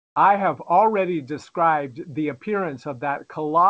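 Comfort noise in place of the background, from 0.00 to 0.16 s: for this opening 0.16 s, the room tone is replaced by a flat, featureless hiss about 28 dB quieter than what follows, dropping well below a background that already sits about 52 dB under the loudest parts. The likely cause is discontinuous transmission, with the sender pausing before speech began and the receiver synthesising shaped noise to fill the gap. Across the clip, nothing reaches above 8 kHz, which fits a wideband call codec.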